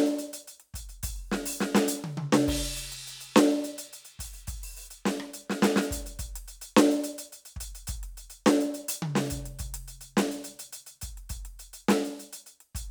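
The music carries no audible technical fault at any point, with the signal holding steady throughout.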